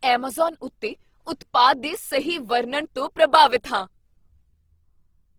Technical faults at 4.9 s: Opus compression

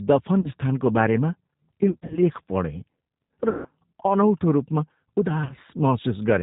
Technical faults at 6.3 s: G.729 codec

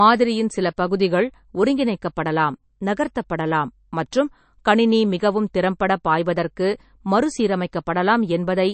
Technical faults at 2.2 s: MP3 compression

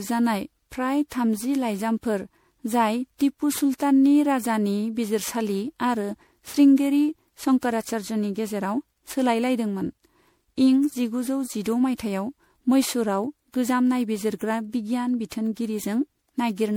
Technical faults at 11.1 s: generation loss

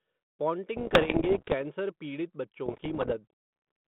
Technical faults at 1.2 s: bit errors on an ADPCM link

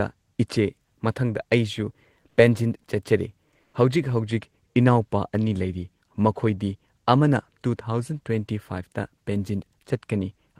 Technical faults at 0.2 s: none

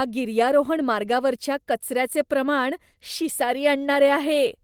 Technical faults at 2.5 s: none

